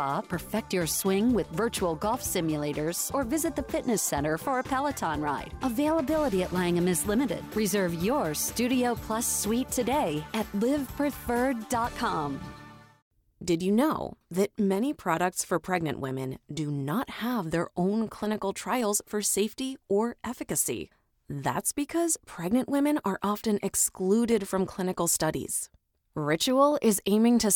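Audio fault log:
1.94–27.51 s, clock drift buffer slips: a click recurs every 3.2 s, about ten times. Likely two clocks disagreeing, so a few samples drop or repeat.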